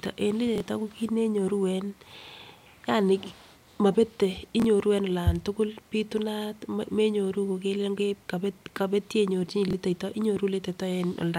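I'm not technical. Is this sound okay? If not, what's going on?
No. At 0.56, 4.60 and 9.68 seconds, a tiny jumbled hiccup is audible, the first just before "ko kit". These are chunks out of order: a 23 ms slice of audio played one slot late, swapping places with its neighbour and leaving abrupt joins.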